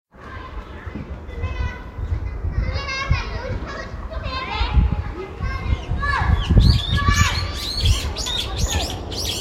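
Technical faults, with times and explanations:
No technical faults can be heard in this recording of sounds. Nothing in it calls for a time or an explanation.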